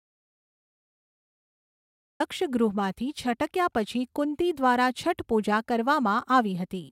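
The audio input was likely lost, leaving an audio dropout to silence from the start until 2.2 s: silence, no room tone, before speech abruptly enters.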